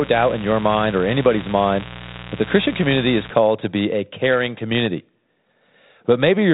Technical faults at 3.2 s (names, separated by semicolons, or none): mains buzz